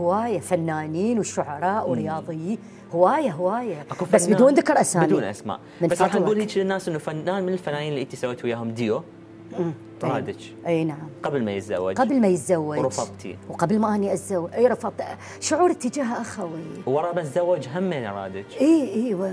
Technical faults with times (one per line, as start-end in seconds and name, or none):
none